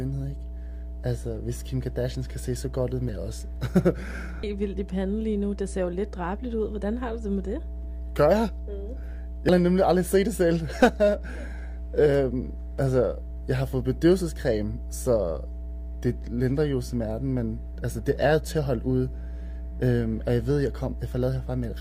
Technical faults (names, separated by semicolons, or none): mains hum; damaged data in a compressed stream